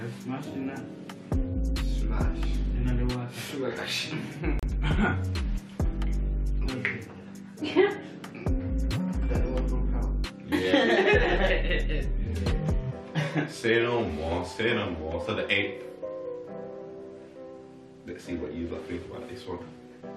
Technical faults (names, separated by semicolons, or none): gap at a join of encoded pieces